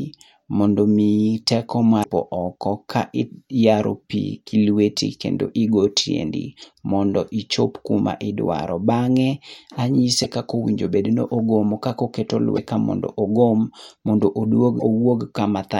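Brief glitches of about 50 ms break into the speech at 2.0, 6.6, 10.2, 12.53 and 14.77 s. They come from damaged data in a compressed stream: corrupted frames throw the decoder out of sync until it finds the next valid frame.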